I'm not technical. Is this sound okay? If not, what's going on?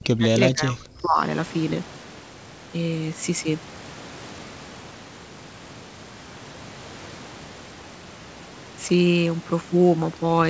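No. From the start to 1.2 s, the speech dips deeply, likely speech suppressed in double talk, when the call's echo control mistook the talker for echo.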